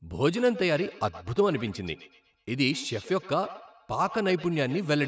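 From 0.36 s to the end there's feedback echo between two devices. Another device in the room replays the call, this mic picks it up, and its own echo canceller can't remove it. The speech returns thin and ringy roughly a tenth of a second later, peaking about 16 dB under the talker.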